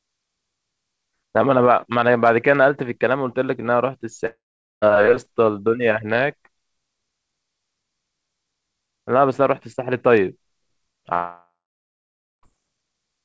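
Speech that cuts out twice, at 4.26 to 4.84 s and again at 11.14 to 12.45 s, most likely long network dropouts. Each time the last sound trails off as a fading buzz or hiss, then goes quiet for about 0.44 s and 0.91 s. Speech picks up again with roughly 0.56 s and 1.3 s simply gone. Nothing comes through above 8 kHz, which fits a G.722 call path.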